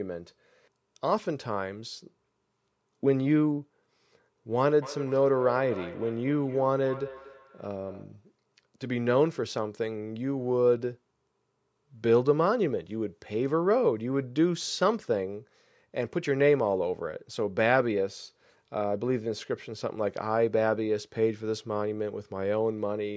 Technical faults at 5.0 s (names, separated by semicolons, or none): feedback echo between two devices